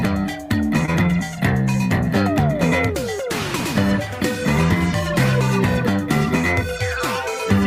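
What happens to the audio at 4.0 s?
Nothing goes wrong at 4.0 s; the audio plays through that moment intact, with no dropout, glitch or distortion.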